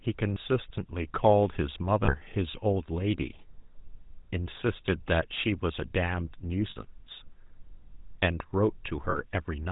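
From the start, the speech carries the marks of the GSM full-rate codec. The bandwidth stops at 4 kHz, so the top end is missing. The codec rebuilds the voice from a vocal-tract model driven by sparse, regularly spaced pulses. That gives a buzzy, gravelly roughness that is plainly audible throughout, consistent with the 13 kbps full-rate GSM coder.

Lost GSM frames then break in four times. At 0.34 s there is a brief metallic catch of about 20 ms. At 2.04 s comes a longer ring of about 40 ms. At 6.70 s the longest lasts about 60 ms. At 9.10 s there is another of about 40 ms. Each time, the decoder repeats the last good frame. The sound holds on a rough, ringing tone instead of dropping out. These lengths fit one, two, three and two missing 20 ms frames.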